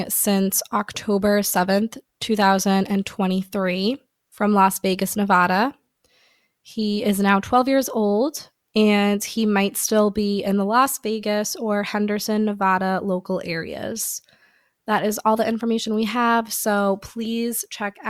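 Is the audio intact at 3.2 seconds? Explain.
Yes, at 3.2 seconds the speech plays through cleanly, with no dropout, click, distortion or other fault at that moment.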